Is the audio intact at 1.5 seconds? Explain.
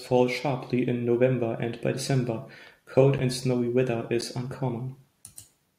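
Yes, at 1.5 seconds the speech plays through intact, with no dropout, click, distortion or other fault at that moment.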